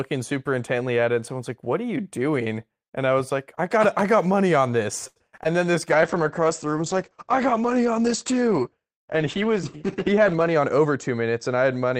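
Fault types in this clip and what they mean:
Short stall from a late packet: Right after "got money on this", around 5.07 to 5.18 s, a packet arrived late and the jitter buffer ran dry, so the receiver held the last sound for 84 ms, then resumed where it left off. Nothing is lost, but delay grows by 84 ms. A spectrogram shows flat, unchanging harmonics stretched sideways; the waveform shows near-identical repeated cycles with a faint dip in level.
Short concealed packet loss: Between "got money on this" and "then this", around 5.36 to 5.54 s and again near 5.44 s, 20 ms chunks of audio never reached the decoder, and the receiver invented fill from the preceding sound, then blended back. It is heard as a brief smear or wobble. On a spectrogram, harmonics blur or turn to a grey noise patch; the waveform shows a small envelope discontinuity at each join.
Call bitrate drop: From 5.92 s to the end, the encoder bitrate falls from 32 to 10 kbps, staying at the lowest rate for about 4.7 s, and audio bandwidth shrinks from 20 kHz to 8 kHz. 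The sound turns muffled and watery. A spectrogram shows a hard ceiling, with everything above 8 kHz gone and coarser, patchy detail below; the waveform's loudness envelope barely changes.
Jitter buffer speed-up: From 10.10 to 10.97 s, excess buffered audio was trimmed by cutting out short pitch-period pieces many times in a row, about 100 ms in total, so the sound runs at 109% speed with unchanged pitch and feels hurried. A spectrogram keeps the same harmonic spacing while events crowd together in time; the waveform shows syllable envelopes packed closer, with tiny splice points.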